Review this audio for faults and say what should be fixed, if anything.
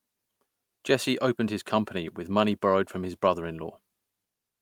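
Nothing to fix: no faults are audible anywhere in this speech clip.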